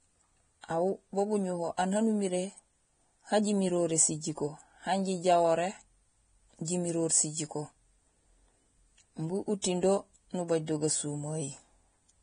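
Heavy lossy coding runs through the whole recording, most likely Vorbis compression at a low bitrate in the region of 23 kbps. The encoder has thrown away everything above 9.7 kHz and quantised the remaining treble so coarsely that fine detail has turned into noise of similar energy. The speech therefore sounds dull at the top yet hissy and grainy, with roughened tones and softened consonant attacks throughout.

From 9.62 to 9.64 s there is a brief pre-echo. A sharp onset landed late in a transform block, and the quantisation noise sized for that loud moment was spread back across the block, filling about 22 ms of quiet ahead of it. You hear a short burst of hiss just before the attack, and the onset itself comes across smeared and blunted rather than crisp.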